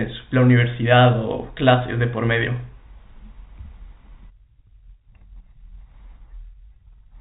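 Nothing faulty stands out anywhere in this speech.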